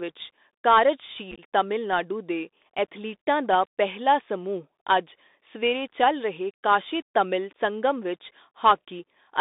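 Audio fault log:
throughout — Bluetooth CVSD headset codec: The speech is narrow and boxy, with nothing heard above about 3.7 kHz or below roughly 250 Hz. A grainy hiss sits under it, s sounds come out scratchy, and loud bright moments break up. This is plainly audible damage from a one-bit delta coder whose adaptive step can't keep up with fast high-frequency swings, which fits a 64 kbps CVSD headset link.
1.31–1.40 s — unconcealed Bluetooth headset packet loss: Just before "ਤਮਿਲਨਾਡੂ ਦੇ ਐਥਲੀਟਾਂ ਦਾ", the speech turns rough and crackly, chopped by several tiny holes with hard edges. About 49 ms of audio is missing, scattered across roughly 75 ms, and the longest gap is about 19 ms. Short voice packets between headset and phone went missing and were filled with silence or an idle pattern rather than patched over, which points to around fifteen lost packets.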